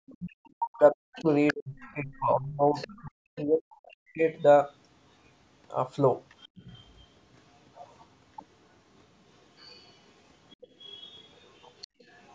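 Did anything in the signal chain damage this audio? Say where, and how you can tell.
Yes. Speech suppressed in double talk, at the call-processing stage, runs from 0.0 to 4.25 s: about three seconds of the talker's speech dips, at worst by around 40 dB. The likely cause is the echo canceller ducking everything during overlap, which shows as holes and thinned high bands on a spectrogram.

The other side's voice leaks through at 1.15–2.2 s (about 10 dB below the speech), 2.74–3.42 s (about 20 dB below), and 6.4–6.48, 9.57–9.96 and 10.5 s to the end (about 30 dB below). This is likely residual loudspeaker echo the canceller missed, visible as a second harmonic pattern.

The background is gated by the echo canceller at 6.48–6.6 s and 11.87–12.01 s, dropping by up to about 24 dB for roughly 100–150 ms. On the waveform the noise floor briefly collapses while the far side is playing, then snaps back when the canceller releases.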